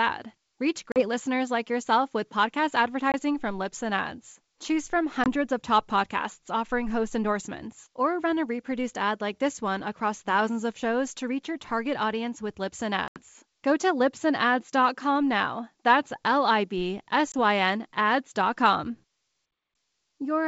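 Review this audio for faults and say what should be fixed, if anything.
Packet loss on an ADPCM call cuts five hard-edged silent holes into the speech: 0.92 to 1.03 s (40 ms lost, about two packets), 3.12 to 3.15 s right after "like yourself with podcast" (20 ms), 5.24 to 5.28 s just before "of top podcasts offering" (20 ms), 13.08 to 13.22 s after "audience with lips and" (80 ms, roughly four packets), and 17.32 to 17.35 s (20 ms). Unlike a plain dropout, the speech doesn't resume cleanly. The receiving decoder's predictor and step size have drifted from the sender's, so each gap ends with brief, slight distortion that settles over tens of milliseconds. The G.722 wideband coding itself sounds clean, with clear speech up to 7 kHz. Adding packet loss concealment with decoder state resynchronisation, plus a jitter buffer or redundancy on the link, would prevent these holes and the recovery glitches after them.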